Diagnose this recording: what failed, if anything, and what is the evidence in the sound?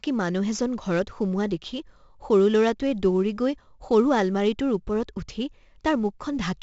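Codec: heavy 4-bit ADPCM compression throughout. Coarse predicted steps leave level-following grit on loud syllables; the spectrogram shows noise tracking speech energy, nothing above 7.7 kHz.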